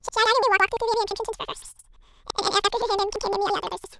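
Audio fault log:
Throughout, planar audio read as interleaved: each 171 ms block of separated left and right samples plays twice at double speed, so the speech sits an octave high with a flutter near 5.9 Hz. Unlike a plain sample-rate mismatch, overall pace stays normal.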